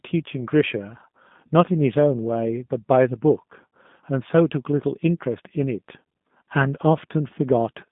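From start to finish the speech sounds thin, rough and faintly synthetic, held between about 150 Hz and 3.6 kHz, with nothing above 3.7 kHz. That is the G.729 codec (G.729A), rebuilding each 10 ms frame from a vocal tract model, a pitch predictor and sparse pulses, which fits an 8 kbit/s stream.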